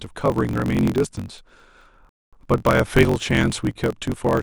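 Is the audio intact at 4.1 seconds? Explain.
No. At 4.1 seconds, as throughout the speech, a block size mismatch (truncated) drops the tail of each block, which fits a 1024-sample read. The result is a 46.9 Hz buzz and speech running 1.12 times fast at near-normal pitch. A spectrogram shows evenly spaced vertical seams, and the waveform shows regular jumps at those joins.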